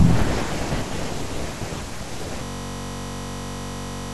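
From 2.44 s to the end, the speech gives way to a steady buzz at about 46.9 Hz. This is a system hang loop: the system froze while the hardware kept replaying one 21.33 ms slice of audio, which fits a 1024-sample buffer.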